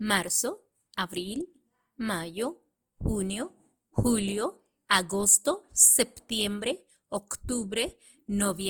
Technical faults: Opus compression

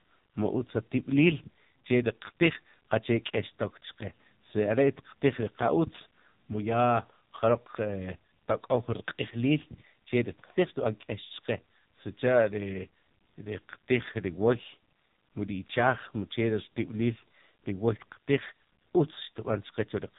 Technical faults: AMR narrowband mobile codec

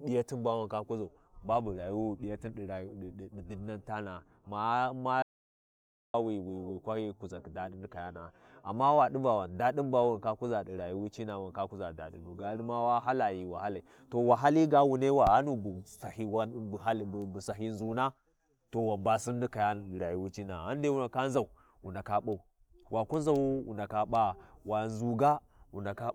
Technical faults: audio dropout to silence

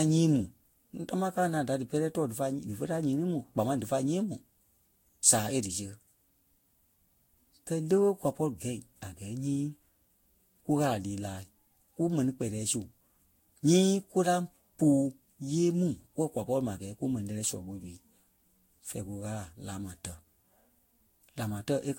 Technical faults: generation loss

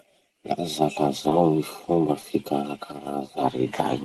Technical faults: short concealed packet loss

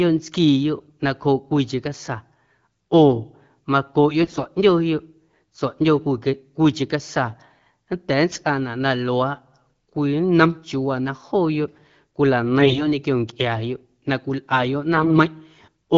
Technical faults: AMR bit errors

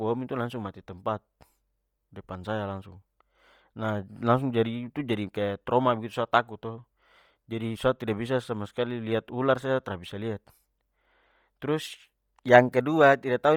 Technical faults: Bluetooth LC3 compression

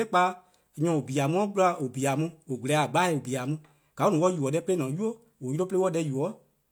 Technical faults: none

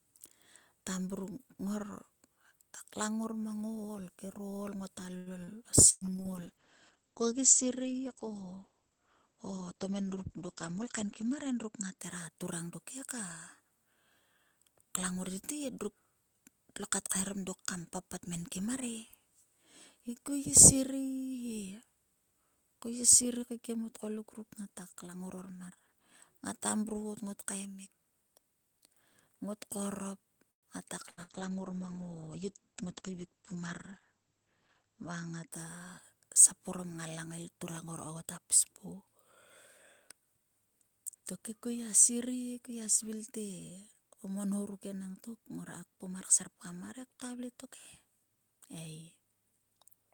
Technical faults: repeated packet loss (robotic sound); call bitrate drop; jitter buffer speed-up; call audio freeze; skip ahead; burst of packet loss

